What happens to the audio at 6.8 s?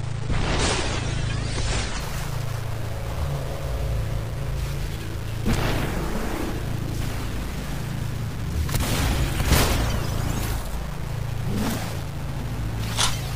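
Low bit depth without dither affects 6.8 s as it does the whole clip: the grain, fitting truncation to about 5 bits, likely tracks the sound, leaving quiet passages gritty.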